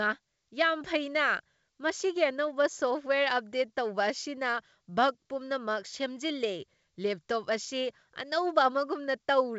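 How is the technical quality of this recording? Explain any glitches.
Nothing stood out on listening to this speech recording, which has the bandwidth of G.722 wideband telephone coding, with no content above 7.7 kHz.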